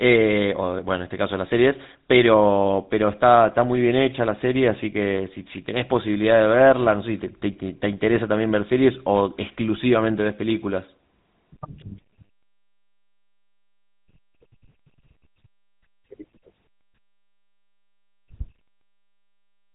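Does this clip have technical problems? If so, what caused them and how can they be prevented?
Yes. Throughout the speech, a GSM full-rate codec has modelled the vocal tract and excited it with sparse, regularly spaced pulses, which fits a 13 kbps GSM link. This gives a plainly audible buzzy, gravelly roughness, and nothing above 3.8 kHz survives. Prevent it by recording or transferring the speech over a wideband path instead of a GSM telephone channel.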